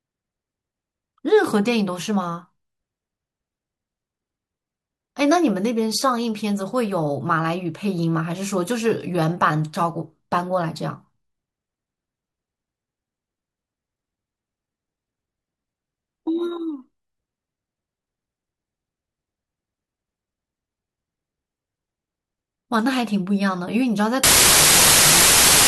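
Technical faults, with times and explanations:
24.24 to 25.68 s, wrong sample width: the final stretch of speech turns into loud broadband noise, with the original only faintly audible beneath it, slowed to 0.75 times speed and lower in pitch. This fits 32-bit samples being read as packed 24-bit ones, so many values combine bytes from neighbouring samples. On a waveform the section jumps in level and looks dense and jagged. A spectrogram shows a bright noise wash over every frequency, with faint speech harmonics compressed downward.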